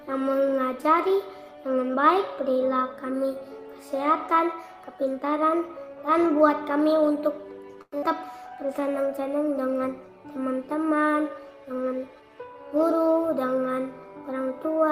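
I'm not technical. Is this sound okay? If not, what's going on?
No, there are three problems.

From 7.81 to 8.04 s there is what sounds like a long network dropout: the sound likely stopped arriving over the connection for a moment. Your player covered the gap by stretching out the last bit of sound, which you hear as a short fading buzz for about 0.2 s, followed by a brief silence. When the sound returns, roughly a tenth of a second of it is missing for good, and the playback is now running slightly more behind.

From 8.43 to 8.93 s there is a jitter buffer slow-down. The player keeps a small reserve of incoming sound so it can play smoothly, and that reserve had either run low or the player had just decided to keep a bigger one. To refill it, the player repeated tiny slivers of sound many times in a row, adding about 64 ms. The pitch stays the same, but the sound plays at about 88% speed, so it comes across as slightly dragged out.

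From 12.08 to 12.99 s there is a jitter buffer speed-up. This time the player's reserve held more sound than it needed, so it cut out many tiny pieces in quick succession, about a tenth of a second in total, to catch up. The pitch is unchanged, but the sound plays at about 112% speed and feels briefly hurried.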